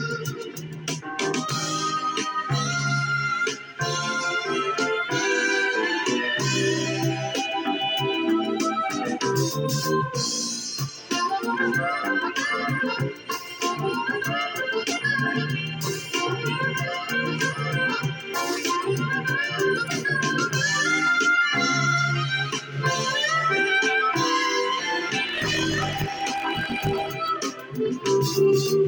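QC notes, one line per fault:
25.25–27.12 s, block size mismatch (truncated): each block's tail is discarded, causing a 46.9 Hz buzz that fits 1024-sample reads. Audio runs 1.12 times fast at normal pitch.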